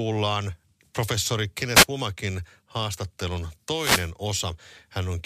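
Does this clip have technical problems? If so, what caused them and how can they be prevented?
Yes. The speech carries two wireless microphone noise hits, short bursts of static at 1.74 to 1.86 s and at 3.73 to 4.10 s, the second lasting about 0.37 s. An analogue FM radio link loses strength when reflected copies of the carrier arrive out of phase and cancel at the receiver antenna. The receiver's noise floor then rises into the audio as a swish over the voice. Keeping a clear line of sight, placing antennas well, and using diversity reception prevents these dropouts.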